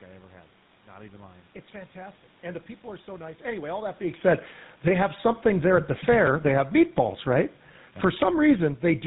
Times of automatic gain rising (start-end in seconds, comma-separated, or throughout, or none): 4.95-5.89